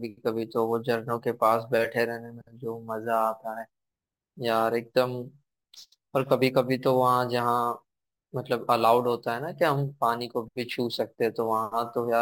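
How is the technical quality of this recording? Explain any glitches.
The quality is compromised throughout the speech by crude rate conversion. Samples were repeated rather than filtered, which fits a jump from 32 kHz to 44.1 kHz. This leaves an inharmonic gritty fizz roughly 25 dB below the speech. On a spectrogram it shows as faint mirrored streaks above the speech harmonics, and in the waveform as tiny staircase steps.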